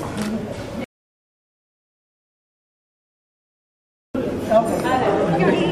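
At 0.84 s the sound cuts out abruptly in mid-flow. This is an audio dropout to silence. The gap lasts about 3.3 s, until 4.15 s. It is silence, with no room tone or noise floor underneath. The sound then resumes just as suddenly. The input was likely lost for that stretch while recording carried on writing silence. Whatever sounded during those 3.3 s is gone.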